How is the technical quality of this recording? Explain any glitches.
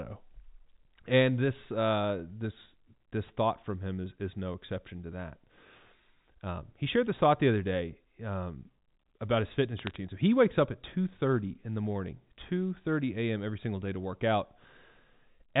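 The recording has one glitch. From 9.78 to 9.96 s, just after "day um about his", bit errors on a digital phone line cause sharp ticks and crackle. Flipped bits, around one in a thousand, corrupt single samples. The audio itself stays unchanged beneath. The telephone band stops at 4 kHz, which fits G.711 A-law coding at 64 kbps.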